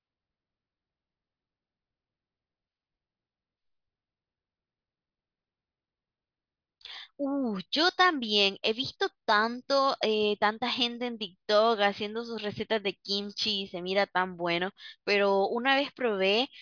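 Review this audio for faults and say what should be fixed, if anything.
No faults can be heard anywhere in the speech. Nothing here needs fixing.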